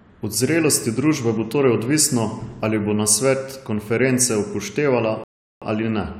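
Near the end, at 5.24 s, the speech drops abruptly into silence and picks up again at 5.62 s exactly where it broke off. That is a rebuffering stall: playback ran dry of downloaded audio and paused until more arrived, adding about 0.38 s without losing anything.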